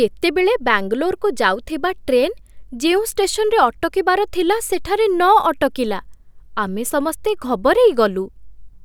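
No technical faults are audible anywhere in the recording.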